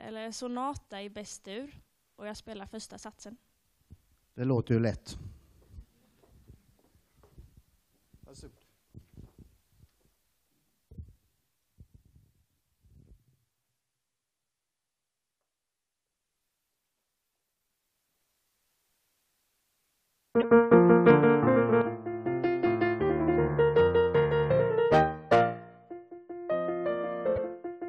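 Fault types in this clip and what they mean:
Corrupt frame decoded: Two brief bursts, from 20.41 to 20.45 s and from 27.30 to 27.38 s, each peaking around -20 dBFS. Bits inside the compressed stream were damaged, yet the decoder played those frames anyway. Misread gains and codes put energy at the wrong frequencies for as long as the damaged frames last. The first burst fits a couple of frames, and the second, longer one fits a few.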